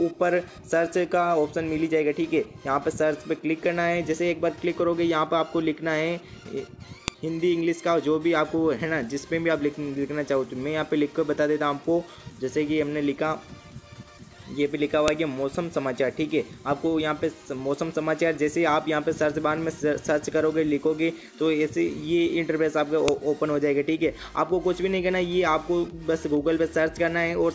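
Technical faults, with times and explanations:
7.08 s, 15.08 s and 23.08 s: file header played as audio. You get a sharp, loud snap at each of these points, spaced exactly 8 s apart, and it lands the same way no matter what the sound is doing at the time. That regular spacing gives it away: the audio was stitched together from 8-second pieces, and each piece's WAV header was left in. Those header bytes got read as sample values, so each join produces a short burst of junk.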